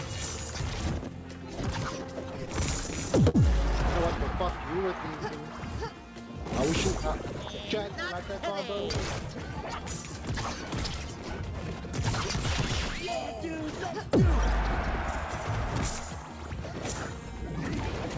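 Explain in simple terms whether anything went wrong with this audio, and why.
Three things went wrong, all caused by audio arriving unevenly over a network connection.

From 2.04 to 3.36 s there are repeated stalls (stutter). The audio stopped arriving on time five times. Each time, the receiver filled the hole by stretching out the last bit of sound. The longest gap was 50 ms, and about 101 ms was filled in total. Nothing was lost. The sound just catches and drags, like a small hiccup repeated.

From 4.19 to 6.04 s comes a jitter buffer slow-down. The receiver's small waiting store of audio ran low. To refill it, the receiver quietly repeated tiny slices of sound many times. Playback drops to 95 percent of normal speed, adding 109 ms. The pitch stays the same. Sounds just seem drawn out and a little sluggish.

From 8.27 to 9.72 s there is the opposite, a jitter buffer speed-up. Now too much audio had piled up in that store, probably after delayed pieces arrived together. 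The receiver trimmed out tiny slices to catch up, about a tenth of a second in all. Playback runs at 107 percent of normal speed with unchanged pitch, so it sounds slightly rushed.

The sound also stops at 8 kHz. That fits the G.722 call codec in the call path, and it is normal, not a fault.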